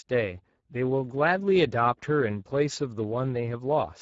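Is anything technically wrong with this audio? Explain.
Yes. Throughout the speech, Speex codec coding starves the excitation of bits, which fits a rate near 10 kbps, so voices sound noisy and hoarse, with nothing above 7.7 kHz.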